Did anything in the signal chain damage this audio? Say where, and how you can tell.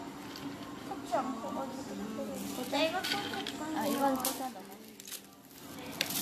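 Yes, at the codec stage: generation loss throughout, with swirly, hollow smearing, blurred attacks and nothing above 14.1 kHz. That is worse than one AAC pass near 64 kbit/s explains, so likely several re-encodes compounding.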